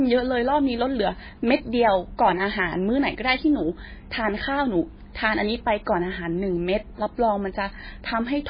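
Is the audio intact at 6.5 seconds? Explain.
No. At 6.5 seconds, as throughout the clip, the speech carries heavy MP3 compression damage, likely from a very low bitrate around 16 kbps. The encoder has cut everything above 5 kHz and switches weak frequency lines on and off, giving a dull, watery, swirling sound.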